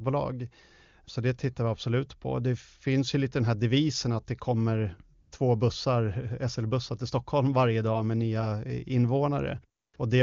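A speech clip where AMR comfort noise cuts in twice: the phone stopped sending speech frames at 5.21–5.31 s and 9.81–9.93 s, so the real background drops out for synthetic steady noise. The AMR wideband (HD Voice) coding itself sounds clean, which points to a high bitrate.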